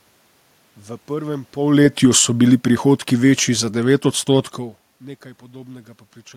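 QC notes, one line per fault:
1.6 to 4.66 s, automatic gain falling: the AGC decided the input was too hot or its background noise too strong and eased its gain down by about 7 dB over those three seconds, so the speech sinks and the room noise sinks right along with it, unlike the talker's own movements near 1.5 and 4.5 s.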